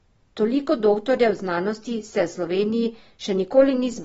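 Sample clock jitter runs through the whole speech recording. The converter clock wanders by around a microsecond, so samples land slightly off time. The error sits roughly 45 dB below the signal. It shows as a faint hiss that roughens loud, bright syllables and disappears in pauses.

For the full length, nothing is left above 7.6 kHz. Sibilants sound dull and fizzy, and sustained sounds warble. The damage is plainly audible. The likely cause is AAC compression, which fits AAC-LC at a low bitrate near 24 kbps.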